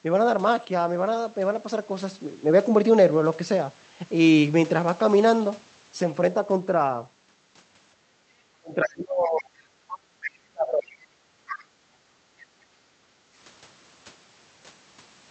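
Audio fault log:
7.96–8.31 s: background gated by the echo canceller. The canceller clamped the microphone while the loudspeaker played, so the room sound sinks by about 9 dB and then returns.
8.59–9.53 s: speech suppressed in double talk. The speech dips by roughly 30 dB for about a second, likely because the canceller could not separate the talker from loudspeaker echo during simultaneous talk.
8.85–8.89 s and 9.38–9.43 s: other side's voice leaking through. Brief scraps of a second voice sit around 15 and 20 dB below the speech, likely echo the canceller left in.
9.92–10.31 s: other side's voice leaking through. A longer stretch of the far voice comes through only about 10 dB under the speech, likely residual echo the canceller failed to remove.
10.32–11.07 s: speech suppressed in double talk. The speech falls away by roughly 35 dB for about 0.7 s, likely the canceller attenuating everything while both sides talked at once.
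11.35–13.36 s: background gated by the echo canceller. The canceller held the microphone down for about two seconds of loudspeaker activity, so the room sound drops by about 10 dB.
11.47–11.64 s: other side's voice leaking through. A short fragment of the far voice sounds roughly 15 dB below the speech, likely echo slipping past the canceller.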